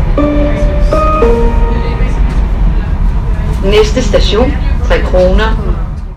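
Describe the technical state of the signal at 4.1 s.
At 4.1 s you're in the middle of hard clipping that runs the whole clip: about 7 dB of overdrive flattens the loudest peaks, roughly 2 percent of samples, giving crackle on peaks.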